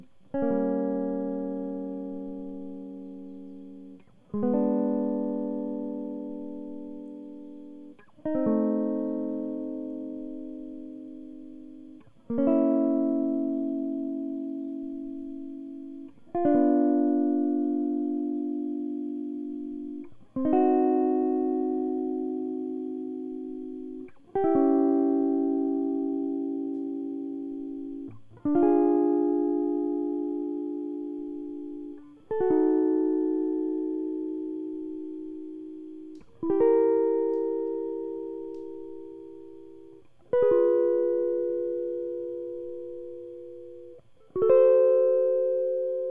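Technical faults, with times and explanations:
Nothing stood out as a technical fault on listening to this music.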